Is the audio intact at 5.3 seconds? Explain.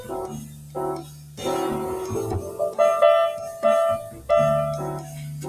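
No. At 5.3 seconds the sound is inside a stretch cut by the noise suppressor, from 5.0 to 5.39 s. The suppressor treated this sound as noise and turned it down, up to about 6 dB. Sustained parts sink and their decay shortens, while sudden onsets get through.

This happens because a noise suppressor applied to music or sounds is active throughout the clip. It mistakes steady tones and tails for noise. Its gain swings by around 20 dB, so the sound pumps and thins.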